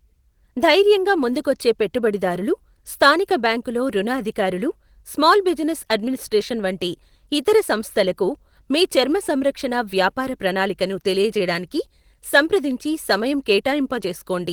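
Nothing technically wrong turns up in this speech recording; it just runs along with no faults to point to at any moment.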